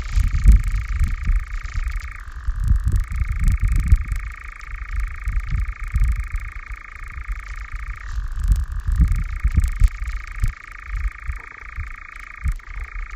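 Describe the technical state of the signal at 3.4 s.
At 3.4 s the resampler restarted on every block fault is present, as it is across the whole clip. Each 40 ms block is converted from 16 kHz to 48 kHz in isolation, so every block edge carries an error, heard as a 25 Hz tick pattern riding on the sound.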